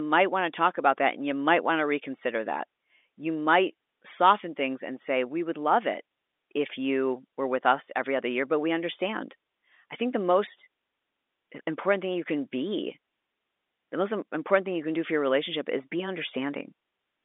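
Nothing stood out on listening to this speech, heard through an ordinary telephone channel whose sound stops a little below 4 kHz.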